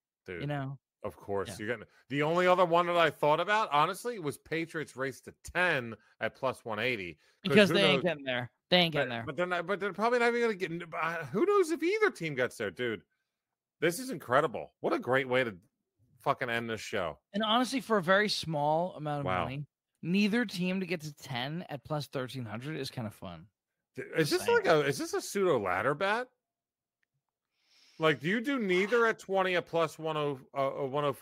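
A drift correction step, likely from clock-matching software, sped playback about 5.5% from 8.38 to 9.34 s, before "they're not but they're", and from 21.1 to 22.03 s, after "team to get to". Each time the speech rose about 92 cents, nearly a semitone, then snapped back.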